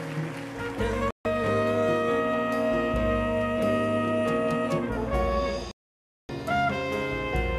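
At 1.11 s the audio drops out for about 0.15 s, and at 5.71 s it goes silent again until 6.30 s, roughly 0.58 s. Both gaps are digital broadcast dropouts: the receiver stopped getting valid frames and muted until good ones returned. The gap lengths fit about six and 24 lost frames of 24 ms each. Whatever was transmitted during those holes is gone, so the sound resumes at a later point in the programme.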